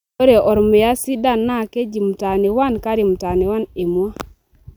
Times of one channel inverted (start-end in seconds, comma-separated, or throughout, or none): none